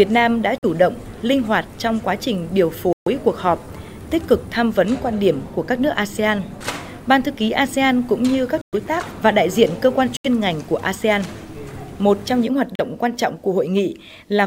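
Five short gaps cut the audio to full silence: at 0.58 s for 47 ms, at 2.93 s for 137 ms, at 8.61 s for 114 ms, at 10.17 s for 78 ms and at 12.75 s for 37 ms. Each is a Bluetooth stall, likely caused by interference delaying packets until the receiver's buffer ran empty. Unlike a plain dropout, the sound after each gap picks up where it stopped or slightly later. Nothing is smeared over, as concealment would do.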